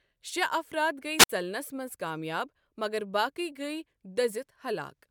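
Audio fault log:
1.18–1.29 s, wireless microphone squelch dropout: the radio link fades, hiss rises, then the receiver's squelch mutes the speech for about 58 ms before it returns.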